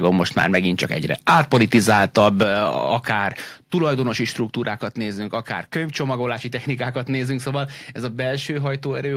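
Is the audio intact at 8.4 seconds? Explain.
Yes, at 8.4 s the speech runs on without any dropout, click, distortion or other fault.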